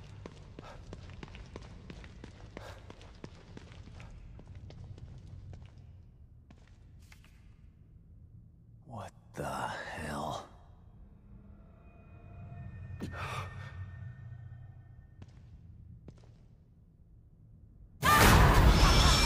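No technical faults can be heard anywhere in this clip. Nothing in the audio stands out as needing comment.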